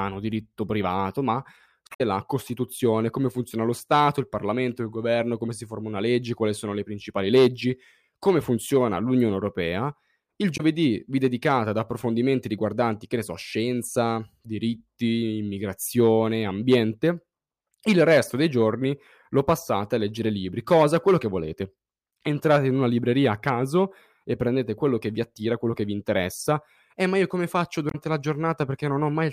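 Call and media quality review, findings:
Short glitches in the speech at 1.87–2.01 s, 10.54–10.61 s and 27.88–27.95 s. Damaged data in a compressed stream: corrupted bytes make the decoder misread frames, lose sync and resync at the next valid frame header.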